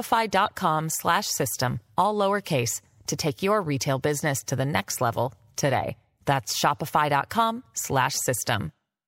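At 0.46 to 0.50 s, near the start of the speech, a corrupt frame decoded fault produces a short glitch lasting about 50 ms. Damaged bits in what sounds like a few consecutive compressed frames were decoded anyway, so misread gains and codes placed energy at the wrong frequencies. On a spectrogram this appears as a brief block of misplaced, smeared energy unrelated to the surrounding speech. In the waveform it shows as an irregular blip peaking around -25 dBFS.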